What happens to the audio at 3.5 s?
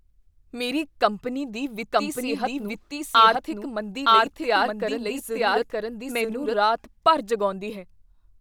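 At 3.5 s the speech is running as a doubled audio track. From 1.92 s, just after "ਮੇਰੀ ਕੰਪਨੀ ਦੀ", to 6.54 s, before "ਰਾਤ ਭਰ", a second full-band copy trails about a second behind at roughly equal level. It is likely a duplicate capture path or misaligned edit. Unlike room echo, it is dry and starts and stops abruptly.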